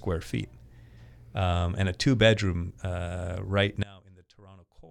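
One channel inverted, from 3.83 s to the end at 4.90 s: just after "two bedroom uh right", the speech drops by about 25 dB into a faint residue. The likely cause is one stereo channel flipped in polarity, so the shared centre content cancels when summed.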